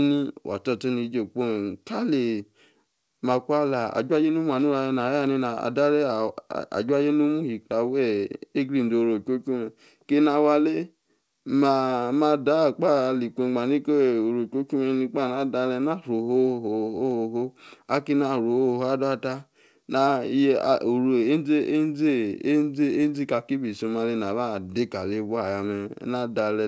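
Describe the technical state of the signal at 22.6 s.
At 22.6 s the speech is intact, with no dropout, distortion or glitch, and the only things to hear are the call path's ordinary coding noise and band-limiting, which leaves nothing above 8 kHz, as a G.722 wideband codec would.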